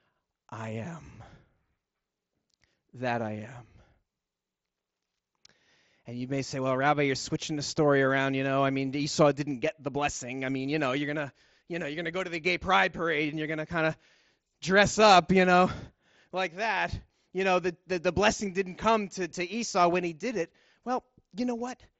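No faults found in this speech clip; it carries the usual sound of a Bluetooth mSBC headset link, band-limited to about 8 kHz.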